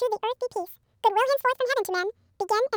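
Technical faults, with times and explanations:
Throughout: audio read two samples at a time (double speed). The speech plays at 2x speed and sits 12 semitones, a full octave, too high. Each pair of samples is treated as one frame, so time is halved.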